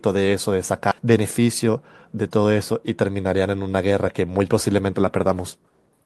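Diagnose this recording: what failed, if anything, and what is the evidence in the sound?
At 0.91 to 0.93 s the speech jumps straight ahead with no gap or fill. This is a skip ahead at the network and jitter buffer stage. Roughly 0.4 s of audio is gone, dropped in transit or discarded when the buffer overflowed with later packets already queued. The two sides of the cut are butted together, so the speech loses a chunk and resumes abruptly. The playout delay shrinks by about the same amount.

From 1.01 to 2.06 s the speech runs at about 112% of its normal rate while the pitch stays put, so it sounds hurried. This is jitter buffer speed-up. The receiver was holding more audio than its target, likely because delayed packets arrived in a burst. To drain the excess, it cut short pitch-period segments repeatedly, removing roughly 150 ms in total across that second.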